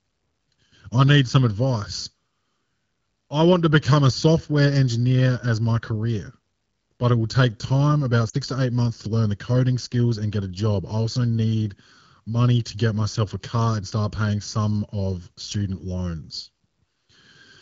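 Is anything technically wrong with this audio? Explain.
Yes, there are lost AMR speech frames from 8.29 to 8.36 s, between "will take time about" and "to eight months to". Radio errors corrupted the frames, so the AMR-WB decoder, running at 12.65 kbit/s, repeated the last good pitch and vocal tract settings at falling gain for about 40 ms, which fits two 20 ms frames. The result is a short dip that falls toward near silence. On a spectrogram the harmonics run flat and fade briefly, and the waveform envelope sags before recovering.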